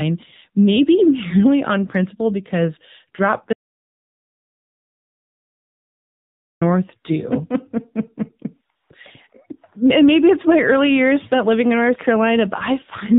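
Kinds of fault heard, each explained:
AMR narrowband mobile codec: the speech runs through an AMR-NB phone codec at 7.4 kbps, so everything above 4 kHz is gone and the voice sounds plainly buzzy and synthetic.
Audio dropout to silence: right after "on principle because drop" the sound cuts to dead silence from 3.53 to 6.61 s, about 3.1 s with no room tone, most likely a lost input.
AMR comfort noise: the phone decided nobody was talking and swapped the real background for smooth synthetic noise, for 140 ms at 8.76 s and briefly at 9.30 s, just before "and maybe it's my".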